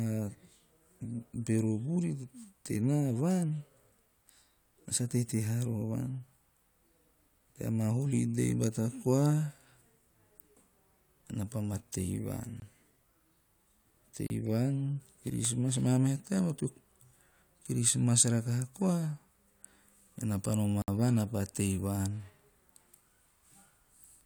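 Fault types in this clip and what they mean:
Block of digital silence at 12.6, 14.27 and 20.82 s: the speech drops abruptly to silence for about 20, 33 and 60 ms, then returns with no fade. This points to the playback or processing chain not delivering a buffer of samples in time and zeros being played in its place.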